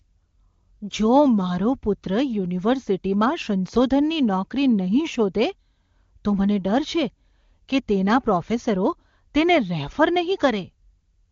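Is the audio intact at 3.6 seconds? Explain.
Yes, the speech at 3.6 seconds is intact, with no fault at that moment.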